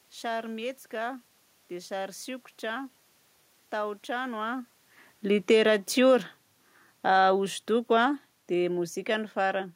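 From 6.94 s to 9.7 s the speech sinks by about 4 dB, and the background room noise sinks with it. That shared drop marks automatic gain falling: the gain control judged the input too loud, or its background noise too strong, and eased its gain down. The earlier level change around four and a half seconds, where the talker moved relative to the microphone, leaves the background steady.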